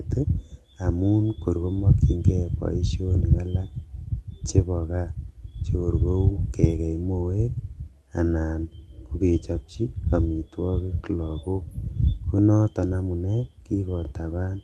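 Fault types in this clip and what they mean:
No faults can be heard.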